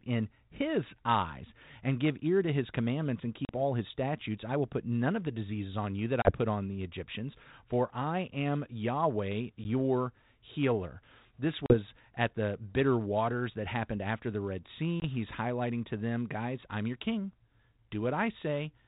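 Packet loss on an ADPCM call breaks the speech at 3.45 s (after "to his commandments and"), 6.22 s (after "diseases on you that"), 9.64 s, 11.66 s (before "at the bitter waters") and 15.0 s. Each is a hard-edged gap of 10 to 40 ms, consistent with one to four lost packets. The G.726 decoder's adaptive predictor and step size drift from the sender's, so speech resumes with brief, slight distortion before settling.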